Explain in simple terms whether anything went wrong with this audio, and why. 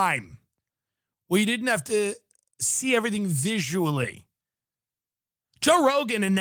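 Nothing went wrong here; the speech has simply passed through Opus voice compression, which is doing its ordinary job and leaves only the light touch you'd expect from a recording that's been squeezed down to a smaller size, with no moment that stands out as a problem.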